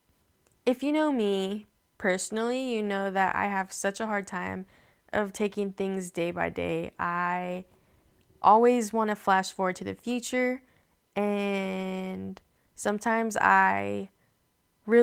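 No audible technical faults.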